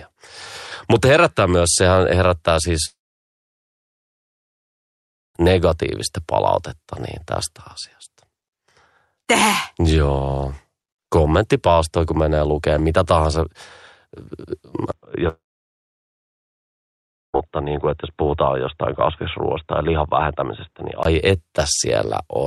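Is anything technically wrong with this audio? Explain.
Yes, there are two kinds of problem. The first is a long network dropout, and it happens twice: from 2.85 to 5.37 s, and again from 15.29 to 17.36 s. Both times the stream likely stopped arriving, so the receiver stretched the last bit of sound into a short fading buzz and then went quiet, for about 2.4 s and about 1.95 s. Speech picks up afterwards with the gap simply gone.

Then from 14.92 to 21.05 s it sounds like the input switched to a poorer device. There's a 20 ms blip of silence at the change, then everything above 3.8 kHz disappears, so it turns dull and boxy. It's also a few dB quieter, with a faint new noise floor underneath.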